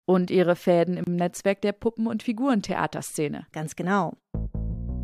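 At 1.04 s the audio drops out for about 30 ms, until 1.07 s, then resumes exactly where it stopped. This is a gap at a join of encoded pieces: two separately encoded segments were joined without trimming the encoder's start-up delay and final-frame padding, leaving silence between them. On a waveform it appears as a flat, near-zero stretch with smeared edges; a spectrogram shows a narrow vertical blank band across all frequencies, its borders slightly blurred by the codec.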